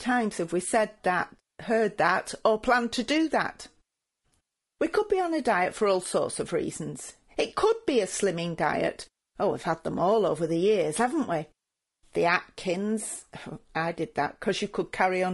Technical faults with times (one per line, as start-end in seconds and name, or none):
0.00-15.34 low-delay AAC compression